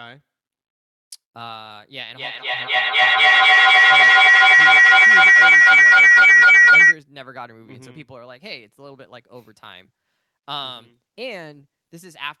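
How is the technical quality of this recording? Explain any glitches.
The recording has one serious glitch, a feedback howl. From 2.1 to 7.0 s a tone around 2 kHz swells to about 22 dB above the speech, with the loop repeating roughly every 300 ms, as two devices' microphone-to-speaker loop amplifies itself.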